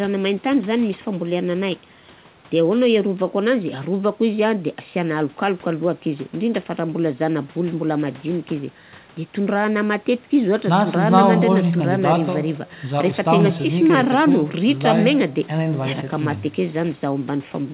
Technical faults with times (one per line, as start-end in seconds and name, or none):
none